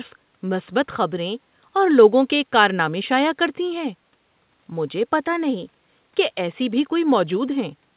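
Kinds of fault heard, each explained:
No faults are present in this speech clip. It has passed through a WebRTC call path using G.711 mu-law at 64 kbps, so nothing is heard above 4 kHz.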